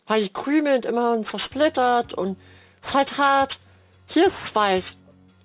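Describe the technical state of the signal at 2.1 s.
Aliasing runs through the whole clip, including 2.1 s: high content folds back below a 4 kHz edge, fitting an unfiltered 8 kHz resample, giving gritty, unrelated tones rather than plain dullness.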